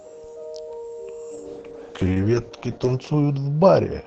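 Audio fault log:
1.33 s to end: call bitrate drop. The speech turns rough, watery and duller as the encoder is starved of bits, staying at its worst for about 1.6 s. This fits Opus falling from 40 to 8 kbps. Unlike packet loss, there are no gaps or clicks.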